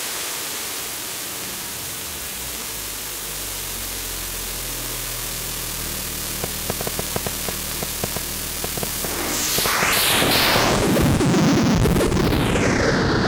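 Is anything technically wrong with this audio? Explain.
Yes. From 6.44 to 10.57 s, a train of clicks at about 5.3 per second, irregularly spaced, roughly twenty near-identical pops well above the sound, likely from equipment interference. The matching click shape sets it apart from random crackle.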